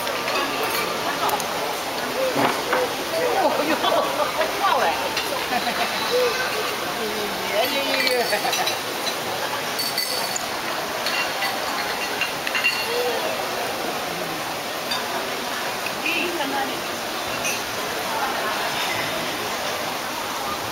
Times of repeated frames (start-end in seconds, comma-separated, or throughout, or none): none